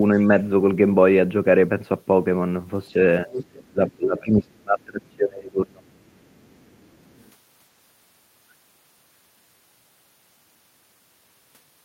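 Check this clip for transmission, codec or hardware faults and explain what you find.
Two echo-cancellation faults turn up, both involving the other side's audio playing on this speaker's loudspeaker.

Speech suppressed in double talk, at 2.93 to 2.97 s and 3.26 to 5.84 s: the echo canceller, likely confused by simultaneous talk, turns the speech down, briefly and then by around 25 dB.

Other side's voice leaking through, at 3.36 to 3.43 s and 5.88 to 7.32 s: residual loudspeaker echo likely escaped cancellation, giving a second voice, fairly clear at first, then barely audible.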